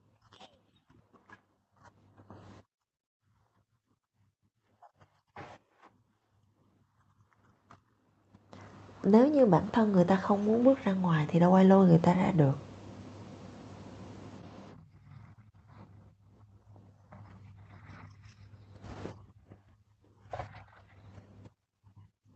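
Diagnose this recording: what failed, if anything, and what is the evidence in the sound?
Automatic gain rising in call processing: from 9.04 to 12.68 s, voice and background swell together by about 7 dB as the AGC ramps up.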